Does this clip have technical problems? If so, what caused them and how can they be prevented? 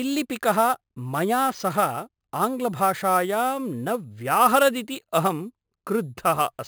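Yes. Imaging from sample-and-hold upsampling runs through the whole clip. Each sample was repeated to raise the rate without a smoothing filter, so mirrored copies of the speech spectrum sit above the original band, which fits source audio at about 11 kHz. The first copy fills roughly 5.5 to 11 kHz at about 16 dB below the speech, heard as a metallic fizz tracking each syllable. On a spectrogram it appears as an inverted reflection of the harmonics above 5.5 kHz, and the waveform shows tiny staircase steps. To prevent it, upsample with a proper interpolating low-pass filter rather than sample repetition.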